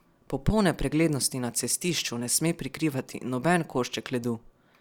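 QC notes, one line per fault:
No fault to note.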